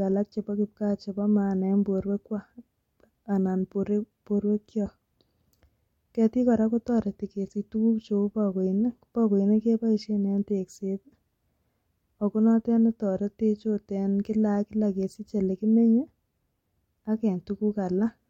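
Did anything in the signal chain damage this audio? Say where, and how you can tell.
No, nothing in the signal chain damaged this audio, and there is no stage I can point to.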